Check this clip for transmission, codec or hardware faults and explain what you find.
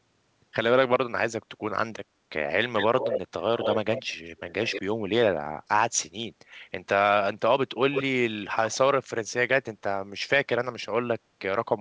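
One fault is present: echo leak, heard in five short bursts.

Echo leak at 2.76–3.2 s, 3.59–3.78 s, 3.95–4.02 s, 4.28–4.82 s and 7.92–8.03 s. A loudspeaker's echo canceller likely missed part of its microphone pickup and sent it back. A copy trails the speech by 166 ms (129 ms at 7.92 s), about 5 to 10 dB quieter.

The band limit of the call path is also audible, with nothing above 8 kHz, which fits G.722.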